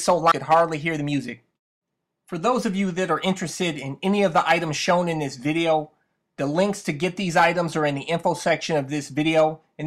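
At 0.31 to 0.33 s there is a skip ahead: playback jumps forward with no fill, and something like 0.4 s of audio is simply absent. The material on either side of the jump is butted together almost directly, so the sound lurches abruptly rather than pausing. This is what happens when a chunk of audio is discarded, either lost in transit or flushed from an overfull jitter buffer, while later audio was already queued and ready to play.

From 0.91 to 1.13 s a jitter buffer speed-up follows. Playback runs at about 114% of normal speed while pitch stays unchanged, so the passage sounds briefly hurried and compressed. The receiver is trimming excess buffered delay by cutting out short segments, each one or a few pitch periods long, over and over in quick succession. Across this stretch that adds up to a few tens of milliseconds removed.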